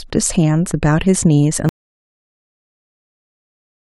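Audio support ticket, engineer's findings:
Input likely lost at 1.69 s: dead link, disconnected device or stray mute, encoder kept writing silence. Audio dropout to silence from there to end of clip. Speech cuts out mid-flow; no room tone, only silence. Remaining content unrecoverable.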